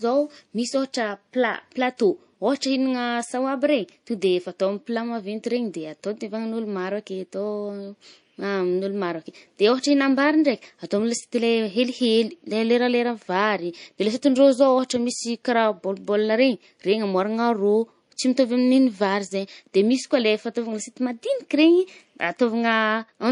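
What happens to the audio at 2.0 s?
The encoder never switched to short blocks here, so a sharp attack at 1.98 s was coded inside a long transform window of about 52 ms. The quantisation noise meant for the loud onset was spread across the whole window, leaking about 19 ms ahead of it and raising the level there by about 11 dB. This is pre-echo: a brief hiss arrives just before the attack, which itself sounds softened and smeared.

Behind it, the speech carries plainly audible codec damage throughout, most likely from MP3 compression at a low bitrate, which fits roughly 40 kbps. With so few bits, the encoder drops weaker frequency lines that flicker on and off from frame to frame. That gives the sound a watery, swirling texture, and the missing switch to short blocks is what leaves the onset at 1.98 s exposed to pre-echo.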